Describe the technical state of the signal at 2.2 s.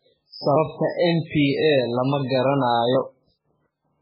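At 2.2 s the speech carries the same heavy codec damage that runs through the whole clip, most likely MP3 compression. Nothing sits above about 5.3 kHz, and the texture points to a very low bitrate, around 8 kbps. With so few bits, the encoder drops weaker frequency lines and they flicker in and out from frame to frame. That gives the watery or swirly character you hear, plus smeared attacks and a dull top end.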